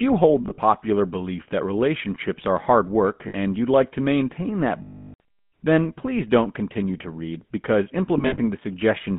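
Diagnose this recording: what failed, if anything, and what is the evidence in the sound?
The codec stage squeezed this speech through the GSM full-rate codec: a pulse-excited vocal-tract model leaves a buzzy, gravelly roughness throughout, inside a narrow 150 Hz to 3.5 kHz band.

The network delivered lost GSM frames at 0.42–0.59 s, 3.28–3.35 s, 4.82–5.20 s and 8.18–8.39 s. Each last good frame repeats, fading, as a metallic ring, longest near 5 s.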